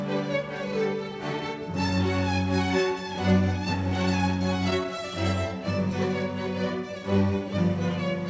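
A music clip carried over a call link with a bandwidth ceiling near 8 kHz, with repeated stalls (stutter) between 3.90 and 4.99 s. Across that span the playback keeps briefly catching, each hitch at most about 11 ms, adding roughly 94 ms of stretched sound. The jitter buffer kept running dry, so the receiver extended the last sound rather than inserting silence. This sets it apart from dropouts or packet loss: nothing is missing. The music drags and stutters instead.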